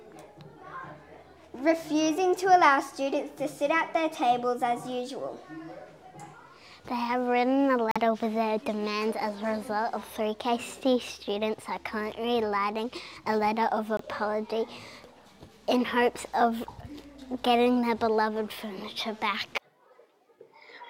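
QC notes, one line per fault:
7.91–7.97 s and 13.97–14.01 s, Bluetooth dropout: The sound cuts to silence twice, for about 60 ms and then about 40 ms. When the sound returns, it has moved on by roughly 43 ms and 21 ms of material, as though it kept playing during the gap. This is likely caused by wireless packets arriving too late at the headphones and being discarded. The second gap fits a single lost frame, the first two.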